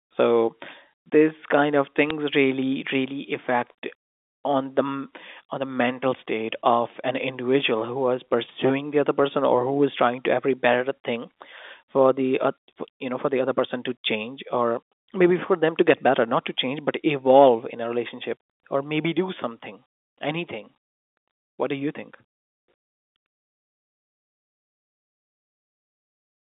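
A sharp tick at 2.10 s marks bit errors on a digital phone line: a few flipped bits knocked individual G.711 samples off their values.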